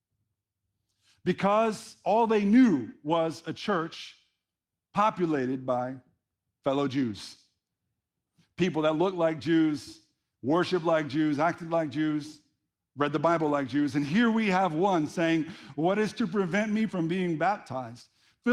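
Nothing in the speech stood out as a technical fault on listening.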